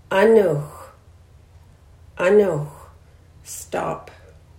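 No technical faults are audible anywhere in this audio.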